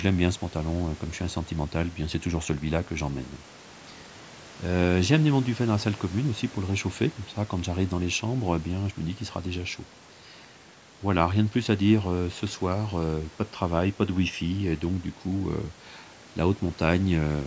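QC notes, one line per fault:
No faults heard in this speech recording.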